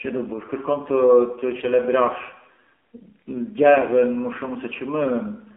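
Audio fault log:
throughout — AMR narrowband mobile codec: the sound is thin, buzzy and synthetic, with nothing above 4 kHz and a line band of roughly 200 Hz to 3.5 kHz. Coding around 7.4 kbps leaves a few pulses per 5 ms subframe to drive a vocal-tract model, so codec damage is plainly audible.
1.60–1.69 s — AMR bit errors: a brief hoarse, scratchy, gargly patch where pitch and level hold roughly steady. Corrupted less-protected bits, around 4 percent, misplace the excitation pulses and skew fine pitch, gain and spectral values across what sounds like three 20 ms frames.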